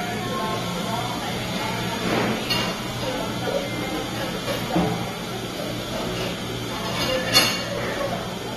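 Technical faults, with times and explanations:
Throughout, AAC compression: the sound is dull and smeared, with nothing above about 12.4 kHz and a warbling, fizzy texture on sustained and hissy parts. The likely cause is lossy AAC-LC coding at a low rate, consistent with around 32 kbps. With so few bits per frame, the encoder lowers its cut-off, thins or drops detail its hearing model treats as less important, and leaves gaps that shift from frame to frame, which produces the swirling residue.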